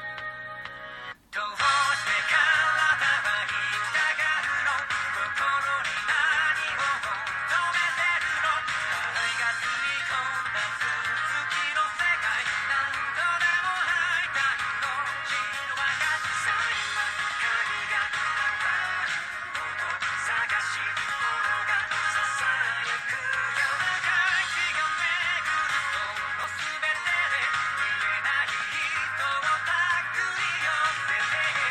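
At 26.44 s, compressed frames were skipped: a short run of coded frames never reached the output, either missing from the stream or rejected by the decoder as corrupt. The sound jumps forward by roughly 40 ms.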